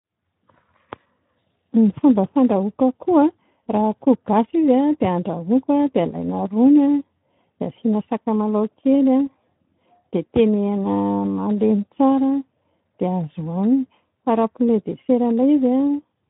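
Speex codec damage runs from start to finish. Speex is a CELP coder that rebuilds speech from a vocal-tract filter driven by a coded excitation signal. At this setting, which fits a bitrate of about 11 kbps, it has too few bits to describe that excitation faithfully. The voice therefore comes out plainly degraded, with a grainy, noisy texture and a hoarse, rough edge where the fine detail of the original waveform has been approximated.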